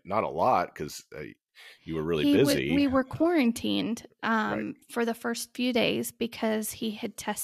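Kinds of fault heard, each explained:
No technical faults are audible.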